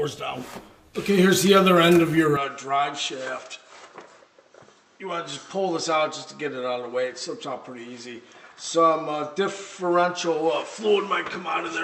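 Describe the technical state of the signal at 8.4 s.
At 8.4 s the signal sits inside a stretch running from 2.37 s to the end of the clip where the input has likely switched to a poorer device. The new input cuts everything above 8 kHz, so the sound turns duller and boxier, drops by roughly 5 dB, and carries its own faint background noise, around 40 dB under the signal. The change happens with no gap at the switch.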